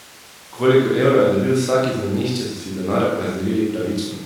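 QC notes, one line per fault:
No faults found in this speech clip.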